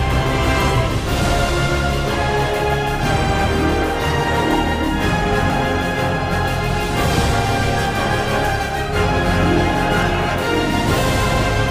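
At 0.68, 2.14, 3.82, 5.5 and 10.1 s the sound skips ahead, each time losing around 20 ms, most likely a dropped buffer (overrun) where incoming samples were overwritten before being read. The surviving sides are butted together with no gap. On the waveform each shows as an abrupt discontinuity with no silent stretch. The spectrogram shows a thin vertical broadband line where the sound jumps.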